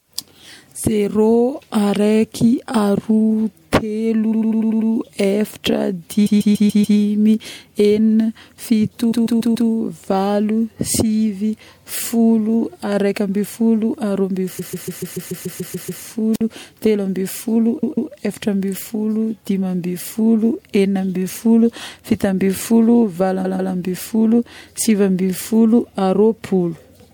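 Stutters loop a short block at 4.31–4.89 s (96 ms, six extra times), 6.25–6.97 s (144 ms, five), 9.11–9.69 s (four), 14.58–16.02 s (ten), 17.82–18.11 s and 23.44–23.73 s (two each). These are repeated frames: compressed data played again, stretching the audio. At 16.33–16.41 s a hiss swells into a 52 ms hole before "teloambifolo eframbifolo". This is a wireless microphone squelch dropout, where the fading radio signal made the receiver mute.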